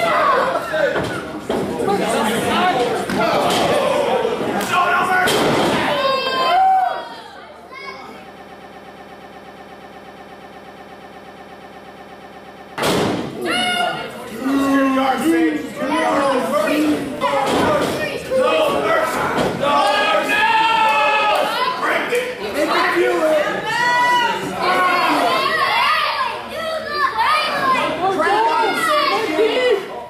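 Around 8.36 s the audio catches on a tiny fragment, about 120 ms long, and just keeps replaying it back to back until 12.78 s, roughly 37 passes in all. That's a classic broken-record loop: it sounds like a fast, mechanical stutter with no variation between repeats. The likely cause is the player or stream stalling and resending the last chunk it had buffered, so whatever should have played in those four-odd seconds is simply gone.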